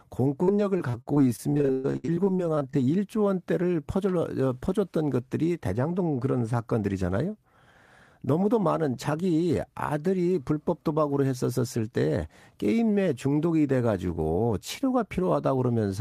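From 0.43 to 2.75 s, repeated packet loss (robotic sound): frequent gaps, up to 122 ms, are patched by extending prior audio, giving choppy, robotic speech across roughly a quarter of the span.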